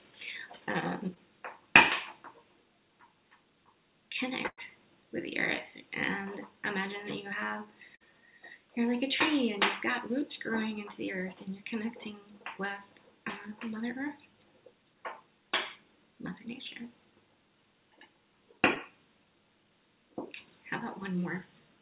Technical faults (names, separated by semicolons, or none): short concealed packet loss; burst of packet loss